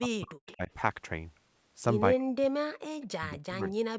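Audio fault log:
0.0–0.71 s, 2.18–2.61 s and 3.07–3.96 s: speech suppressed in double talk. The speech dips hard, by up to about 40 dB at its deepest. It loses level and breaks into pieces. About half a second is affected in the first span and a little less in the second. Nearly all of the last span is hit. The likely cause is an echo canceller turning both talkers down while both sides spoke at once.
0.47–0.56 s and 3.01–3.06 s: echo leak. A faint, delayed copy of the speech comes back in short scraps. It trails the original by 228 ms. The first scrap sits about 25 dB below the speech, and the second about 30 dB below. The likely cause is a loudspeaker on one side whose echo canceller did not remove everything its microphone picked up. The leftover was sent back down the call.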